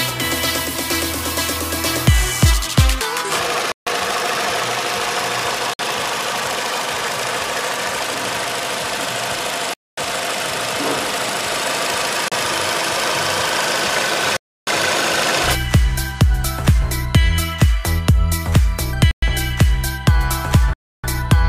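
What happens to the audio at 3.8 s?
The sound drops to complete silence from 3.72 to 3.87 s, a gap of about 148 ms, and then resumes. This is likely a Bluetooth stall, where radio interference delays packets and the headphones' buffer runs empty until resent data arrives. A concealed packet loss would leave smeared filler sound, but this gap is a clean, dead-silent hold.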